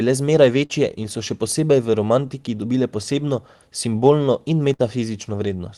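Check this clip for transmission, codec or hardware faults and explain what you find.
Two packet-loss faults are audible in the speech.

At 0.65 to 0.71 s, just before "in so še posebej", there is a short concealed packet loss. About 40 ms went missing, and the receiver extrapolated the preceding sound to cover it. It is heard as a brief smear.

At 4.73 to 4.81 s, right after "dobile posebno simbolno in", a burst of packet loss drops about 60 ms. The concealment stretches the last sound and fades it, and the speech then resumes further on. The waveform shows a decaying stretch.

On the call path, the spectrogram shows content cut off around 12 kHz, which fits Opus at a moderate bitrate.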